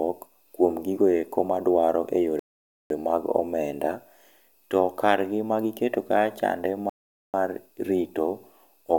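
Speech that twice drops into dead silence and then picks up exactly where it left off. The first gap runs from 2.39 to 2.90 s, between "kuom gigoeko maduaro" and "mag omenda". The second runs from 6.90 to 7.34 s. These are rebuffering stalls: playback used up its downloaded audio and waited for more to arrive. Nothing is skipped, but the clip is stretched by about 508 ms and 443 ms.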